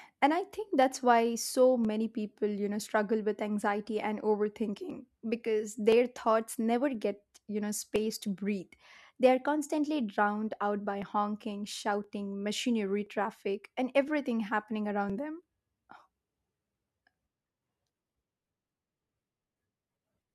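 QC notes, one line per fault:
0.82–20.20 s, periodic USB or driver dropouts: starting just after "I think", something blocks the USB bus or audio driver every 1.02 s, and each time a few milliseconds of speech are skipped outright, about twenty in all, giving evenly spaced ticks that sound only under speech.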